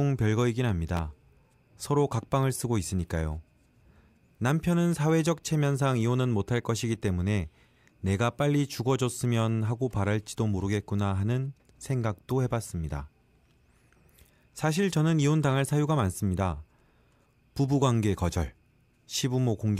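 At 0.97 s a single loud pop cuts in, lasting until about 1.00 s. It is a sharp, brief burst that stands well above the speech, peaking roughly 10 dB higher. The speech carries on underneath without a break. The likely cause is a sudden voltage spike entering the signal path, such as a connector being disturbed, a switch, or a static discharge. The circuits after it shape that spike into the short thump heard here.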